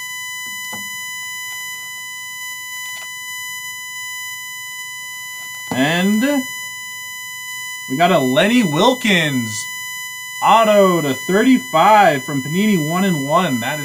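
Throughout the recording, a USB whine sits under the audio at a fixed pitch of 1 kHz, loudest at its 2 kHz harmonic and roughly 15 dB below the signal. The USB bus's 1 ms frame timing is leaking into the audio path through shared power or ground.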